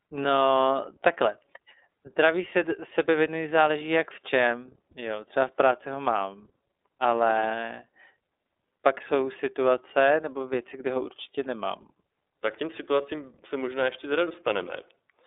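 iLBC codec, throughout the clip: the speech has passed through a narrowband VoIP codec that codes the excitation of each frame on its own, without drawing on the previous one. The band is limited to about 300 Hz to 3.7 kHz, so the top end sounds dull and telephone-like, and the coding damage is plainly audible as a rough, somewhat synthetic edge on the speech. The character fits iLBC's 30 ms frame mode at around 13.3 kbps.

Lost iLBC frames, from 4.92 to 4.95 s: a packet went missing, and for about 30 ms the decoder filled the hole by repeating the last pitch cycle blended with noise. The gap comes across as a brief held, faintly buzzy vowel sound. The drop points to a single lost frame. Because each iLBC frame decodes independently, the speech snaps back to normal straight after the gap instead of smearing into the following sound.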